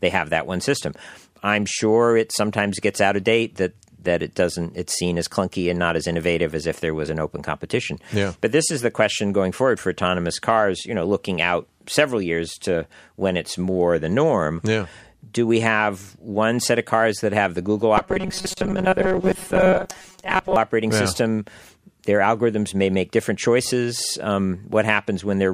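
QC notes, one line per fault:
17.98–20.56 s, robotic sound from repeated short buffers: audio likely arrived too seldom, so about half was filled by repeating a roughly 5 ms slice, giving a rigid 188 Hz metallic buzz before "operating yeah system".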